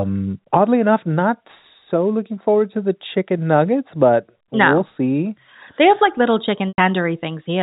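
Packet loss with pitch repetition at 6.69–6.78 s, after "have like little": about 100 ms went missing, likely five 20 ms packets, and repeating the last pitch period produces a briefly held, buzzy tone.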